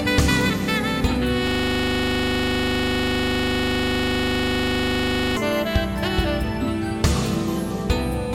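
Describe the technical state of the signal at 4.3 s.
At 4.3 s you're right in the middle of a system hang loop that runs from about 1.47 s to 5.37 s. The machine or its driver has locked up while the audio hardware keeps replaying the same ring buffer, so a single 40 ms slice of the music repeats exactly, close to a hundred times. That gives a rigid, rattling buzz at 25 Hz in place of the music, which fits a 40 ms buffer stuck in a loop.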